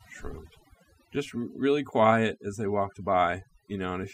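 Overdone noise removal runs through the whole speech clip. A noise reduction stage set far too aggressively has pulled individual frequency bands down to nothing wherever their level sat close to its noise estimate, taking softer parts of the voice along with the noise. Pauses fall to near silence sprinkled with twinkling, chirpy specks. On a spectrogram the background shows as scattered isolated dots, and the speech harmonics look patchy and eroded.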